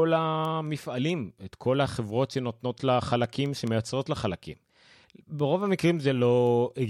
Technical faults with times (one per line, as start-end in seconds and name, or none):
0.24-6.68 word clock ticks